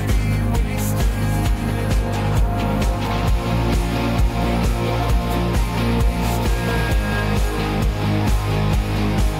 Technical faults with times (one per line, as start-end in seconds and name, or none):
none